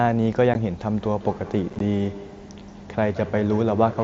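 A speech recording carried over a wideband mSBC Bluetooth headset link, with the codec's light graininess on loud sounds, has two kinds of fault. Unconcealed Bluetooth headset packet loss leaves a 15 ms hard-edged hole at 0.54 s, and between 1.70 and 1.81 s about 38 ms of audio drops out in short gaps, none longer than 15 ms, which sounds like a brief chopped crackle. The gaps are left unfilled, with no smoothing or repeated sound, so they are not concealed dropouts or a sample-rate glitch. From 1.01 s to the end, feedback echo between two devices adds repeats of the speech at a steady spacing of about a fifth of a second. The loudest repeat sits about 16 dB below the direct speech, and each return sounds thinner and more ringing. The fixed repeat interval and the ringing, which builds with each pass around a loop between two devices in one room, set it apart from the diffuse tail of room reverberation and from the single delayed copy of ordinary line echo.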